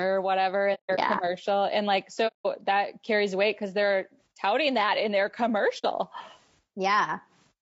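Throughout, the speech sounds rough and grainy, likely from low-delay AAC compression at around 32 kbps, with noise smeared between harmonics and a thin, synthetic-looking top band on a spectrogram.

AAC frame loss with muting leaves soft-edged holes: scattered dropouts between 0.74 and 0.99 s, with the longest run lasting about 150 ms, then 2.27 to 2.46 s and 5.78 to 5.85 s. The decoder zeroed the missing spectrum, so the waveform tapers to silence and back, and the spectrogram shows clean vertical blank bands.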